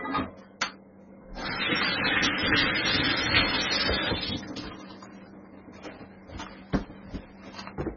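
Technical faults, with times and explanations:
Throughout: MP3 compression. Nothing is present above 5.9 kHz, and weak spectral detail flickers in and out between frames, giving a heavily watery, swirling texture with smeared attacks. This is likely a starved MP3 encoder, which fits a bitrate around 16 kbps.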